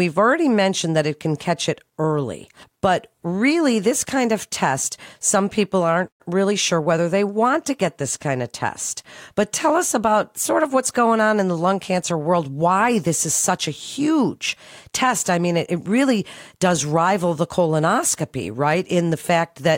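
Nothing goes wrong anywhere in this speech recording, so there's no technical fault to point to at any moment.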